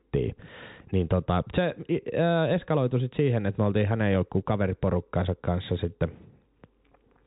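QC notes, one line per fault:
No faults found: the speech runs continuously over G.711 mu-law telephone coding at 64 kbps, with nothing above 4 kHz and only faint quantisation noise following the signal level, as that coding normally behaves.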